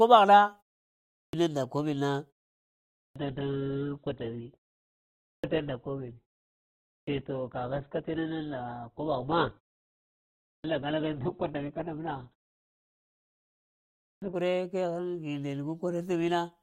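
Speech bursts in abruptly at 0.9 s with its opening cut away. This is a clipped start after a pause: the output device slept through the short gap and lost about 0.43 s on waking. From 2.35 s to 14.35 s the treble vanishes above 4.3 kHz and the sound turns thin. An adaptive stream switched to a lower bitrate, with the drop fitting a change from around 64 to 8 kbit/s Opus. Inside that stretch the same swallowed onsets recur at 2.71, 4.97, 6.61, 10.2, 12.88 and 13.79 s. Each follows a pause of 0.4 to 0.7 s and loses 0.43 to 0.47 s, while the pauses themselves fall cleanly silent.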